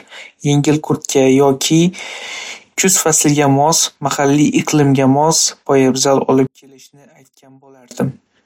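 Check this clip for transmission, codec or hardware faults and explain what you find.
There's one fault. From 6.47 to 7.91 s the speech drops by about 32 dB, likely from one channel inverted, so the shared content cancels when summed to mono.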